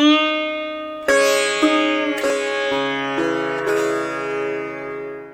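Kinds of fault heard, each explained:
Overlap between stream segments: two segments' timestamps overlap, so about 11 ms of sound near 2.3 s gets trimmed away, leaving a tiny skip where the waveform jumps.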